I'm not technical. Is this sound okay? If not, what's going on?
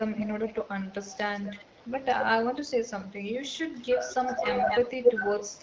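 No. There are two call problems here.

Speech suppressed in double talk: the speech briefly sinks in volume at 0.09 to 0.28 s, 1.57 to 1.69 s and 2.57 to 2.72 s, and again in patches from 3.89 s to the end. It sounds like a volume dip, not a clean dropout, and is likely the call's echo control turning the audio down while both sides talk.

Echo leak: a second copy of the speech arrives about a quarter of a second late. It is faint at 1.37 to 1.64 s and strong from 4.4 to 5.12 s, where it is as loud as the speech or louder. Unlike room reverberation, it is a distinct repeat, likely from a speakerphone microphone picking the call back up.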